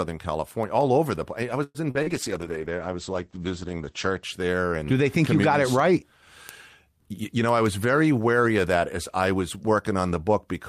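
At 1.63 to 1.78 s the speech stalls, its last sound stretched into a fading buzz that ends in brief silence. This is likely a call audio freeze: delayed packets emptied the jitter buffer and about 113 ms of gap was inserted. Brief smears follow at 1.91 to 1.98 s and 2.03 to 2.10 s. Each is a short concealed packet loss, where about 40 ms never arrived and the receiver filled it by extending the preceding sound. From 2.04 to 4.29 s the speech turns muffled and watery. This call bitrate drop took the encoder from 48 to 11 kbps, narrowing the bandwidth from 20 kHz to 8 kHz. At 6.99 to 7.36 s the speech hurries by about 11% without a pitch change. A jitter buffer speed-up removed around 50 ms of pitch periods to reduce its excess delay.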